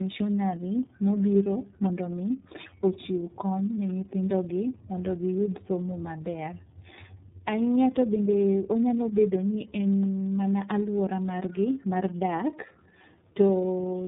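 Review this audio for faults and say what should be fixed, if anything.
Tandem speech coding runs the whole way through: the speech went through two low-rate speech codecs one after another, likely G.729A and then iLBC with a G.711 hop between, so the second coder worked on already damaged audio. The result is rough, warbly and muffled, with nothing above 3.8 kHz. To prevent it, keep one codec end to end or pass the coded stream through unchanged instead of decoding and re-encoding at each link.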